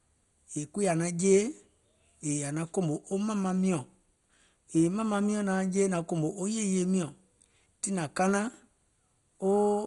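Throughout the speech, the top end stops near 11.2 kHz and the remaining bands sound gurgling and granular, with upper sub-bands flickering in and out. The heavy damage points to MP2 compression at a rate that fits about 56 kbps, likely starving bands of bits. A simple low-pass filter would dull the sound without this warbling grit.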